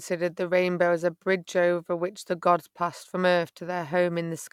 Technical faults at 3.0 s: none

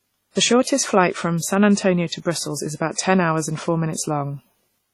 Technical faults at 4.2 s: WMA compression

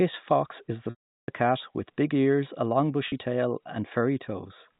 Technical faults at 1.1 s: packet loss with pitch repetition

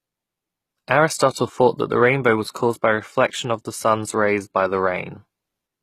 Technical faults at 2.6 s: HE-AAC compression

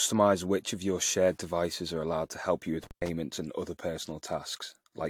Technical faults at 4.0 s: generation loss

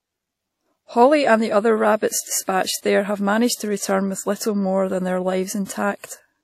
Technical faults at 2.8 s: WMA compression; pre-echo

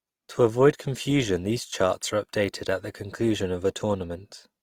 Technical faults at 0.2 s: Opus compression

